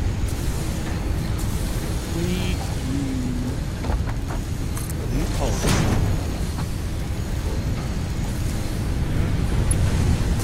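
No technical fault can be heard anywhere in this audio. There is nothing to time and no cause to trace.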